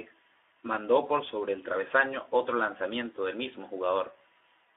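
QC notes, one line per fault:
throughout Speex codec: plainly hoarse, noisy speech held to a 300 Hz to 3.6 kHz band, as too few bits reach the CELP excitation, which fits an 11 kbps setting.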